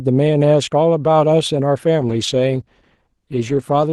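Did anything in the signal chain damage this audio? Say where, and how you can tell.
Yes. At the network and codec stage, a call bitrate drop starts at 2.04 s and lasts to the end. The speech turns rougher and muffled, which fits the encoder falling from 32 to 14 kbps, bottoming out for 1.58 s, coding more coarsely and trimming the high frequencies.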